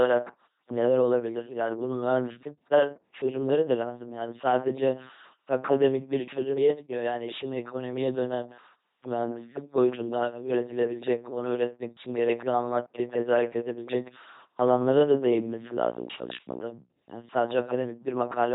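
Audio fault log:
throughout: LPC-10 vocoder. The speech is a buzzing, mechanical robot voice with heavy damage and nothing above 3.8 kHz. A pulse train or noise drives a short vocal tract filter, each moment taken as fully voiced or unvoiced, consistent with a 2.4 kbit/s LPC-10 codec.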